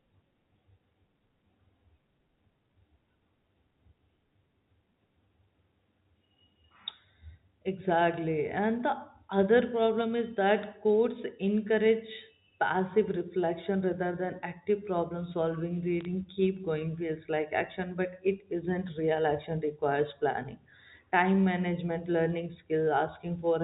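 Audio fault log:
16.01–16.05 s, bit errors on a digital phone line: between "than active problem solving" and "keep going feels like", flipped bits in the G.711 stream corrupt single samples, and each hit on a high-order bit or on the sign of a loud sample becomes a sharp tick, giving a brief crackle at an error rate of roughly 0.15 percent.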